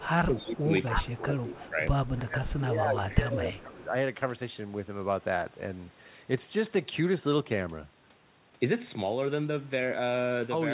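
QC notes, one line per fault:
0.0–1.82 s and 2.22–3.93 s: speech suppressed in double talk. The voice dips in pieces, by up to about 20 dB in the first stretch and about 15 dB in the second. The echo canceller likely turned down this side's voice along with the loudspeaker echo while both sides talked at once.
0.39–1.69 s, 2.17–2.53 s, 2.99–3.14 s, 3.51–3.6 s: echo leak. A delayed copy of the voice trails it by 278 ms. It sits about 10 dB down in the first stretch, then returns as short scraps about 15 to 20 dB down. This is likely loudspeaker echo the canceller let through.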